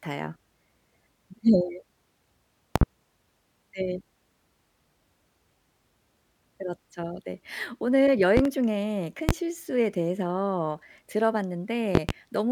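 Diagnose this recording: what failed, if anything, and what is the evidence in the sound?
Sharp loud pops cut through the speech four times: a double pop at 2.76 to 2.85 s, another double at 8.37 to 8.49 s, a single at 9.29 to 9.32 s, and a double at 11.95 to 12.12 s. Each stands roughly 20 dB above the speech, which carries on underneath. The likely cause is a voltage step or pulse entering the analogue wiring, from a loose plug, a switch or static. The circuits downstream shape each pulse into a brief thump.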